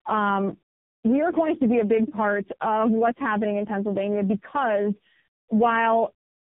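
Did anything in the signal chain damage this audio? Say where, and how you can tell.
Yes. The codec stage shows tandem speech coding for the whole clip, from start to finish. The speech is rough, muffled and warbly beyond what one low-rate coder would cause, and nothing sits above 3.7 kHz. The sound points to three speech codecs in a row, probably G.726, then iLBC, then AMR-NB, with G.711 links between them. Each border decodes and re-encodes the audio, so every coder models the previous coder's errors and the damage compounds.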